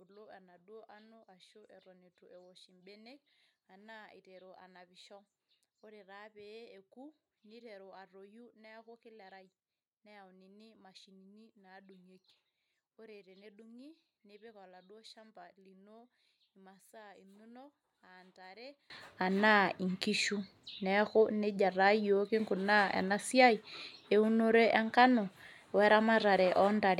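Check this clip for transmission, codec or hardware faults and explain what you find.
There's one fault. From 0.0 to 18.9 s the speech drops by about 28 dB and turns faint, as if most of the voice has cancelled out. That's likely one channel inverted: with one stereo side's polarity flipped, the centred voice and low end cancel when the channels are summed to mono.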